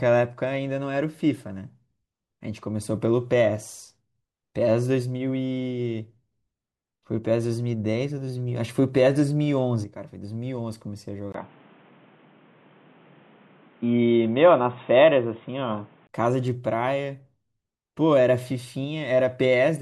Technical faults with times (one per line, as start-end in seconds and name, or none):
11.32-16.09 input switched to a poorer device